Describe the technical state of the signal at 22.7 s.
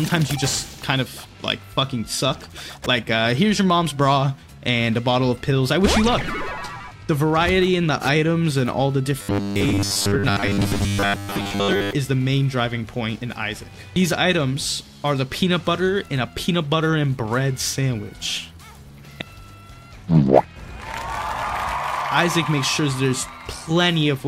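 At 22.7 s the signal is intact, with no audible fault at that point.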